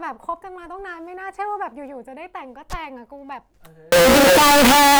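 A speech clip that turns into very loud, harsh distortion from 3.92 s to the end at 4.99 s. Quiet moments are as loud as the rest. The likely cause is signed and unsigned mixed up on 16-bit samples: the flipped top bit turns every zero crossing into a jump across the full range.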